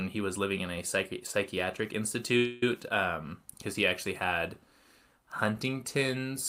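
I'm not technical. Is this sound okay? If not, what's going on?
No. At 2.37 to 2.64 s the speech stalls in a call audio freeze: the last sound stretches into a fading buzz or hiss for about a quarter of a second, then carries on where it stopped with nothing missing. The likely cause is delayed network data running the receiver's buffer empty.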